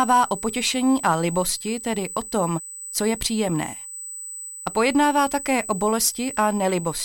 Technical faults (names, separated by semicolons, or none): USB whine